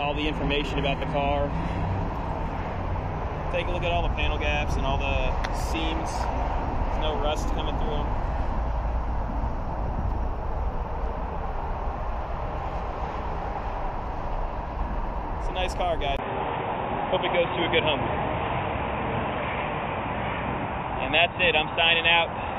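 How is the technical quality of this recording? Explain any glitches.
Two glitches stand out, one at the start and one near the end.

From 0.0 to 2.0 s, an adaptive stream starting at a low bitrate, which fits HE-AAC at 20 kbit/s, gives thin, synthetic-sounding treble and stronger artefacts before quality jumps abruptly, without a gap.

At 16.17 s, the input was likely switched to a poorer device. After a 20 ms silence, the sound turns dull up to the end, with nothing above 3.8 kHz and a faint new noise floor, while the level stays about the same.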